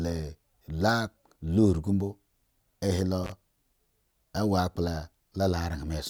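At 3.24 to 3.32 s, an intermittent contact briefly opens the line: the speech drops out for about 33 ms, with crackle at each edge and faint hiss during the gap.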